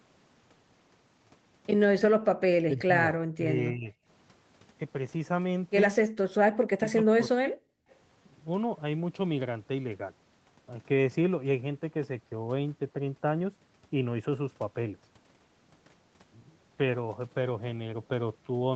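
From 2.69 to 3.16 s and again from 3.36 to 3.93 s, the speech dips by about 25 dB, and from 6.69 to 7.45 s it falls by about 40 dB. This is likely speech suppressed in double talk: with both ends talking, the echo canceller turned down the near voice along with the echo. Then, from 7.73 to 7.88 s, the room sound drops out for roughly 150 ms, by about 40 dB. This is background gated by the echo canceller, which clamped the microphone hard while the loudspeaker played, then released it.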